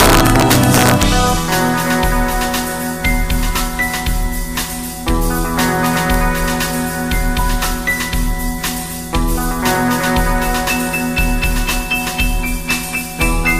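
Violent, snapping cracks hit the loudest peaks from the very start to 1.03 s, and again briefly between 5.86 and 6.14 s. This is integer overflow. In the opening stretch the signal was pushed about 3 dB past full scale, and in the later one it sat right at the limit. Instead of being held at the ceiling, each peak that exceeded the largest representable value wrapped around to the opposite extreme, so the waveform jumps across its whole range. That is why the cracks sound far harsher than ordinary clipping.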